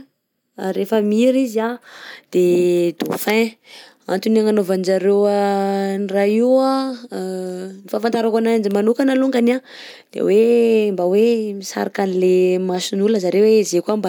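No technical faults can be heard anywhere in the speech. At no point does the audio change in a way that points to a problem in how it was recorded, processed or delivered.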